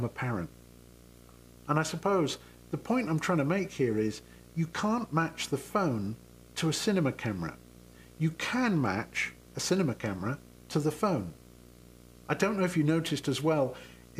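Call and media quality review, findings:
Video or display buzz, whole clip, start to finish. Steady buzz at 59.94 Hz with hash riding on top, plus a thin whine at 15.7 kHz. Sits around 20 dB under the signal. Probable component: a screen or video cable coupling into the audio path, leaking its field rate and line rate straight in. Check cable routing and grounding near the display first.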